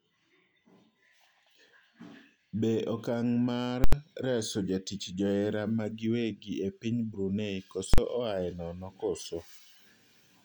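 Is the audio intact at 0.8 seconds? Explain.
Yes, the speech at 0.8 seconds is intact, with no dropout, click or distortion at that moment.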